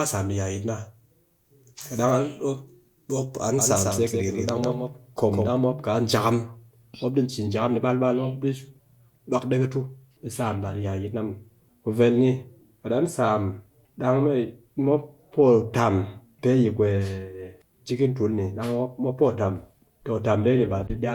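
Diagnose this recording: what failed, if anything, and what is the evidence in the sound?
A doubled audio track from 3.58 to 5.48 s: a full-band copy trails by roughly 150 ms, about 5 dB down, starting and stopping abruptly, likely from a slower second capture path. Unlike echo, it has no decay.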